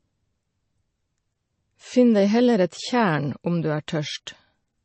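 All the way through, the speech has a hard ceiling at about 8.3 kHz and a watery, swirly edge, most likely from MP3 compression. The encoder is starving for bits, which fits a bitrate somewhere around 34 kbps, so it chops the treble and lets faint detail flicker in and out.

Pre-echo shows up at 3.87 s and again at 4.26 s. Each time, a brief smear of hiss, about 10 to 12 ms, sneaks in just before a sharp onset. The codec spreads noise meant for the loud attack across the quieter moment ahead of it, which softens the hit.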